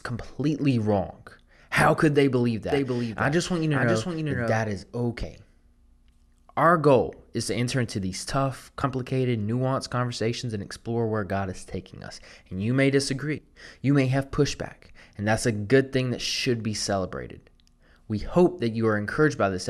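From 2.72 s to 4.60 s, just after "could they believe", a doubled audio track appears: a second full-band copy of the speech runs roughly half a second behind, about 5 dB quieter, with no reverberant tail. The likely cause is the same signal being captured again through a slower path. On a spectrogram, each harmonic and onset reappears as a fainter, identical echo offset by a fixed gap, and both its start and end are abrupt.

At 5.23 s, 8.83 s (between "enter into these tough" and "nuanced conversations and explore") and 13.38 s (after "you may"), compressed frames are skipped. Each time, roughly three 26.1 ms frames, about 70 ms of audio, never play, so the speech lurches forward with a brief smeared blip rather than a sharp click. The waveform shows a slightly blurred splice with a short discontinuity in the envelope, and the spectrogram shows harmonic tracks jumping position at a soft vertical seam.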